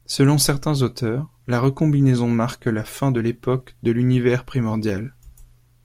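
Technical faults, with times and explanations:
There are no technical faults, so there are no times or explanations to give.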